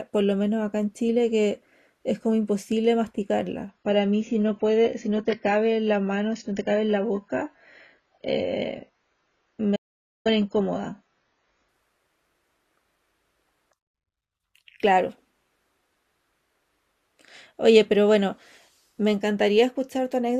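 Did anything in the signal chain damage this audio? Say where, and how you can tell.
Yes. From 3.69 to 11.69 s, the network forced an adaptive stream at a lower bitrate. Treble stops abruptly at 7 kHz, with no gap.

An audio dropout to silence hits at 9.76 s and lasts 0.49 s. The gap is silent, with no room tone. Likely a lost input link.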